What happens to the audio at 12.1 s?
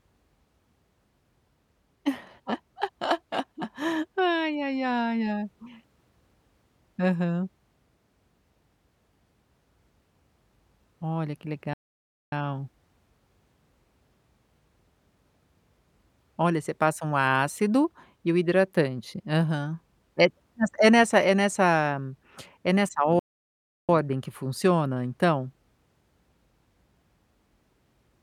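At 12.1 s the speech is in the middle of a playback stall, a silence running from 11.73 s to 12.32 s, about 0.59 s. The sound halts mid-flow and the output goes dead until playback recovers, most likely because the player ran out of buffered data or its thread was briefly blocked. A dropout of a few milliseconds registers as a tick or a clipped syllable. This is one long, clean gap that reads as the audio freezing.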